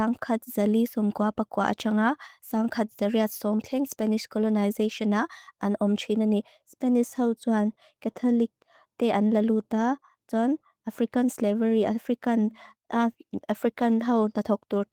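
Speech recording, no technical faults to report.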